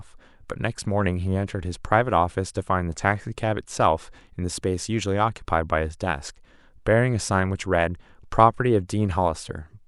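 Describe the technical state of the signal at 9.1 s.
At 9.1 s the speech signal is intact, with no dropout, distortion, glitch or other technical fault audible at that point.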